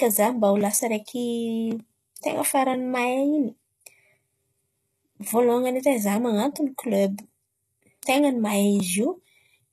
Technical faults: HE-AAC compression

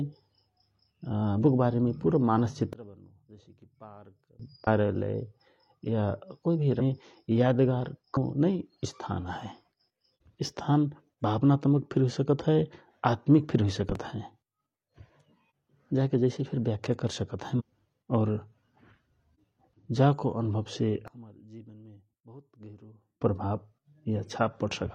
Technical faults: sudden gain jump; damaged data in a compressed stream; loud pop

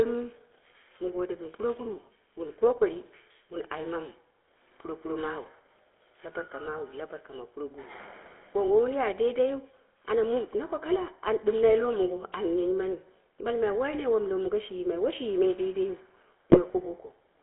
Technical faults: GSM full-rate codec; GSM bit errors

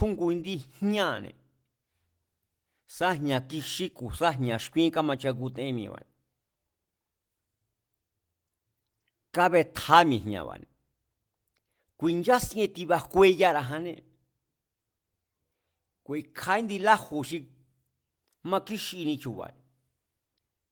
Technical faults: none

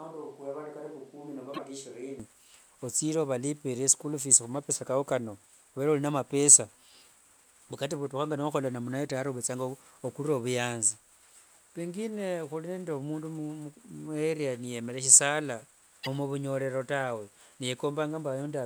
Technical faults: switch to a distant microphone; broken MP3 bit reservoir

